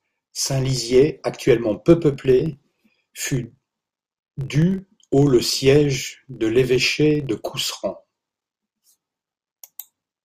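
Speech throughout, carrying a steady buzz at about 43.1 Hz from start to finish. This is a filter restarted on every block. Its state is reset to silence at each block boundary, leaving a small transient every 1024 samples or so, which fits 44.1 kHz audio. The ticks fuse into a buzz whose strength rises and falls with the speech level.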